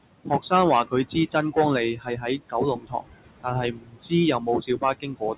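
Noise suppressor artifacts run through the whole speech clip. The suppressor treats the steady room noise, which sits about 14 dB under the speech, as something to remove band by band, and pulls it down by about 21 dB. Between phrases the background drops away almost to nothing and then swells back under the speech. The band-limited sound, with nothing above 4 kHz, fits a G.711 A-law call path.

Speech cut by the noise suppressor happens five times, where the suppressor mistakes quiet parts of the speech for noise and lowers them with the background. From 0.24 to 0.52 s, about a tenth of a second is pushed down by up to about 17 dB. From 1.94 to 2.54 s, about 0.3 s is lowered by up to about 15 dB. From 2.75 to 3.07 s, about 0.3 s drops by up to about 20 dB. From 3.72 to 4.12 s, about 0.3 s is cut by up to about 19 dB. From 4.39 s to the end, the cut reaches about 20 dB. In each span, the affected speech sounds swallowed or faint.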